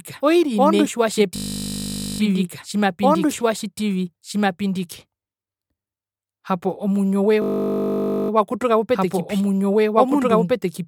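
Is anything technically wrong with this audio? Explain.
Yes, the clip has two faults.

A doubled audio track runs throughout. A second full-band copy of the speech trails the original by about one and a half seconds at roughly equal loudness, likely from a second capture path or a misaligned edit. Unlike an echo or reverb, the copy has no decay and no room colour.

A system hang loop occurs twice, from 1.36 to 2.2 s and from 7.42 to 8.3 s, the second right after "omuinjo we". The driver stalled while the hardware replayed one 20 ms buffer, producing a steady 50 Hz buzz. That exact repetition separates it from a dropout or a random stutter, and the speech resumes with no apparent gap.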